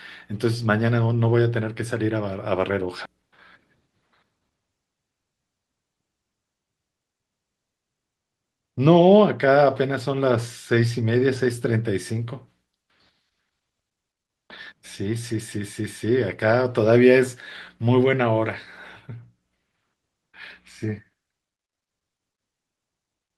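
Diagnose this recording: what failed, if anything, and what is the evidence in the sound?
A skip ahead at 3.05 s, in the network and jitter buffer stage: the speech jumps forward with no gap, losing roughly 0.7 s. That stretch was discarded while later packets were already queued, so the two sides are spliced almost directly and playout latency drops.

A jitter buffer speed-up from 3.80 to 4.40 s: the speech runs at 110% speed with unchanged pitch and sounds hurried. The buffer was holding more than its target, so it trimmed short pitch-period pieces repeatedly, removing some 70 ms in total.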